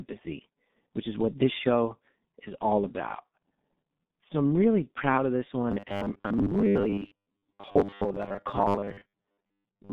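Throughout, the speech carries G.723.1 codec damage: nothing above 3.7 kHz, a muffled, hoarse tone and smeared consonants, consistent with a 6.3 kbit/s low-rate telephony stream. From 5.72 s to 9.93 s a rigid 100 Hz metallic buzz appears, likely from repeated short buffers of about 10 ms replacing roughly half the real audio.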